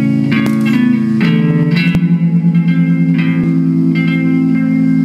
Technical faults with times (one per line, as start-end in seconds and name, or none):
0.46 dropped buffer (overrun)
1.95 dropped buffer (overrun)
3.44 dropped buffer (overrun)
4.55 dropped buffer (overrun)